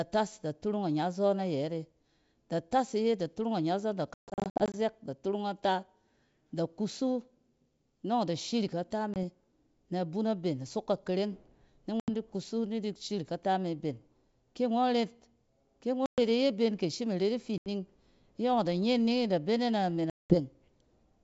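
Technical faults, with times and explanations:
4.14–20.36 s, packet loss on an ADPCM call, six events: at 4.14–4.75 s, between "ida turung anyazↄn da" and "da turung ata", 360 ms of audio drops out in hard-edged holes spread over 600 ms, the longest about 140 ms. At 9.14–9.17 s, just after "nↄng ida shirik ata", a single 20 ms hole occurs. At 12.00–12.09 s, between "ka kareng ni" and "di kusu ni", 80 ms is lost. Further losses of 120 ms occur at 16.06–16.20 s, 80 ms at 17.58–17.68 s and 200 ms at 20.10–20.36 s. The gap lengths step in 20 ms units, which fits 20 ms packets. Each missing stretch is filled with silence. Because ADPCM sends only differences, the receiving decoder's predictor and step size drift away from the sender's during the hole. When the audio resumes, it comes back slightly distorted until the two resynchronise over the next few tens of milliseconds. Across all six events, the G.722 wideband coding at 64 kbit/s carries the sound with at most faint coding damage.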